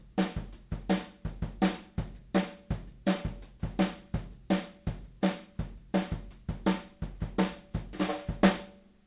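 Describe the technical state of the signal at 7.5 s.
At 7.5 s the audio is intact, with no fault present; the sound there carries only the ordinary character of the G.711 A-law call path, band-limited so that nothing is heard above 4 kHz.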